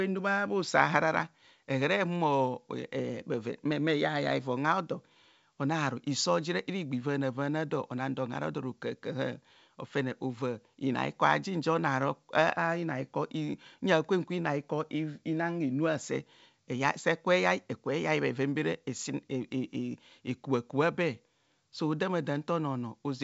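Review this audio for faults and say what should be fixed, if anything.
No faults; nothing needs fixing.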